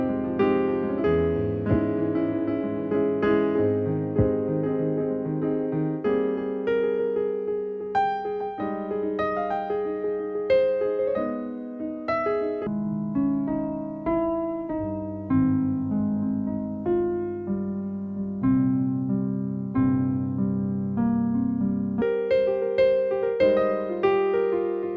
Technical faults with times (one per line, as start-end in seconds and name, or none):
12.67-22.02 wrong sample rate